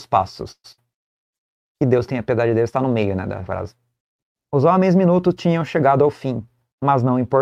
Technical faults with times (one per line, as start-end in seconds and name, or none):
0.51-0.66 call audio freeze
0.72-0.87 burst of packet loss
5.92-7.07 jitter buffer speed-up